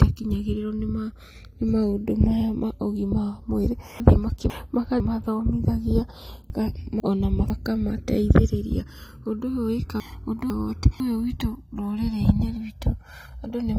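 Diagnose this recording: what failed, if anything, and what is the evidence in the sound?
Channels drifting apart, at converter or driver level: two separately clocked devices differ by roughly 150 ppm, so inter-channel delay grows to about 1.5 ms. In mono, the comb notches sweep slowly, unlike a fixed delay's static coloration.

Chunks out of order, at the buffer or storage stage: at 4.0–5.0 s, 6.5–7.5 s and 10.0–11.0 s, a 500 ms block plays one chunk late. Nothing is missing, unlike a dropout.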